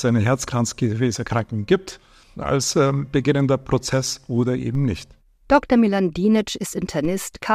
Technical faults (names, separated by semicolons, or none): DC step